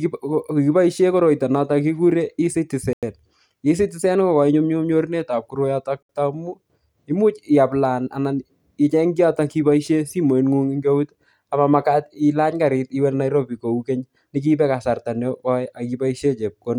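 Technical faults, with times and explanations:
2.93 to 3.03 s and 6.03 to 6.09 s, Bluetooth stall: the speech drops to silence for 96 ms, then 67 ms, before "taamu imuch iaplana anan", and resumes. This is likely a wireless link stall, where delayed packets let the receiver's buffer run empty until retransmissions arrived.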